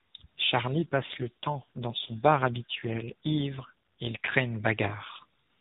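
From about 0.75 s to 4.37 s there's an AMR rate drop. The speech goes rougher and buzzier, more synthetic, which fits the link pushing the codec down from 12.2 kbps to around 5.9 kbps and spending the freed bits on error protection. The band stays the same narrowband AMR-NB sound, with no gap. Once the rate climbs back, the speech regains its earlier texture.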